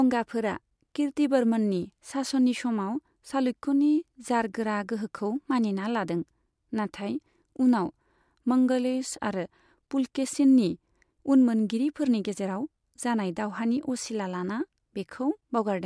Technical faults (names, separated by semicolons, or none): none